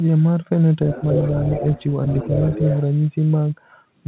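An echo canceller that likely missed loudspeaker playback lets the other side's voice leak through from 0.9 to 1.85 s, only slightly quieter than the talker, then from 2.07 to 2.81 s, much fainter. Everything sits below 4 kHz, which fits narrowband telephone coding.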